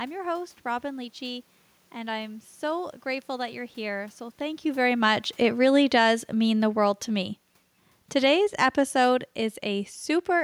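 From 4.67 s to 7.43 s the automatic gain falls. The gain control judged the input too loud or its background noise too strong and eased its gain down by about 6 dB, so the speech and the room noise behind it sink together, unlike the talker's own movement around 4.5 s.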